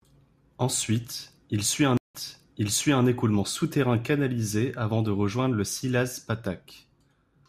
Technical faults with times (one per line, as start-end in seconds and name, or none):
1.97-3.05 stream reconnect